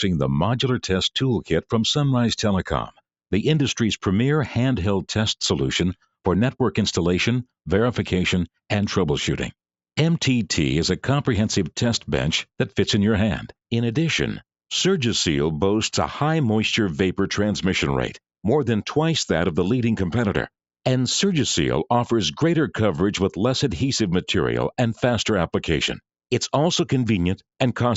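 At 1.43 s, the noise suppressor cuts sound it mistakes for noise. Until 1.73 s the level sinks by about 13 dB. A second cut runs from 2.86 to 3.01 s and goes deeper, about 19 dB. In each case roughly 150 ms of sound is pulled down. The suppressor's gain drops on that stretch alone. It sounds like a brief dip or a tail chopped short. The band stops at 8 kHz, as the call path allows.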